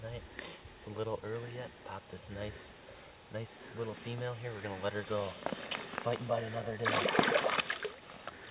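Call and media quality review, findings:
No faults found; the call path behaves as a narrowband telephone link, with nothing above 4 kHz, consistent with G.711 A-law at 64 kbps.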